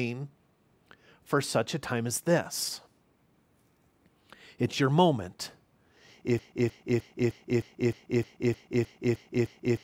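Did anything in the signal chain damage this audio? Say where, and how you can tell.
Yes. From 6.39 s to the end of the speech, a broken-record loop repeats one 0.31 s fragment 11 times. The copies are identical and never decay, unlike echo. That points to a stalled player or stream buffer, likely, resending its last fragment while the intervening audio is lost.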